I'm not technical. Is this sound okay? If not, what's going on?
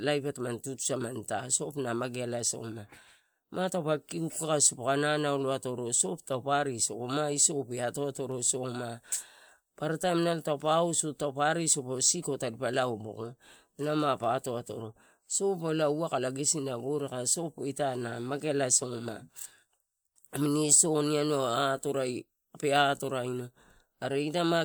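Yes, this recording sounds fine. There's nothing technically wrong here that you need to worry about.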